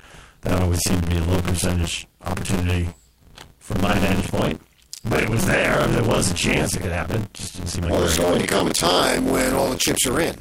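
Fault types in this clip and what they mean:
Buffer tearing: a steady robotic buzz at about 86 Hz rides on the speech wherever there is signal, for the whole clip. Writer and reader have slipped within the ring buffer, so roughly half of each period replays audio about 40 ms old, which fits a 512-sample buffer.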